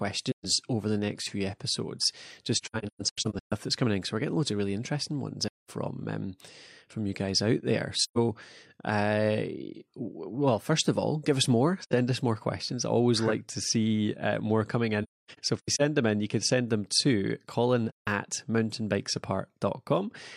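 AAC frame loss with muting at 0.31 s before "over the next few", 2.55 to 3.53 s (scattered), 5.47 s, 8.03 s, 11.83 s, 15.03 to 15.82 s (scattered) and 17.89 s. Zeroed frames leave soft-faded dropouts of about 85 to 300 ms.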